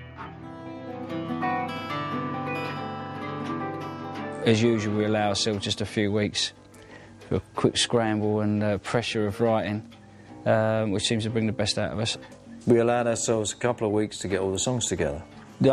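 No technical faults can be heard anywhere in the clip. Nothing in the audio drops out, breaks up or is disturbed at any point.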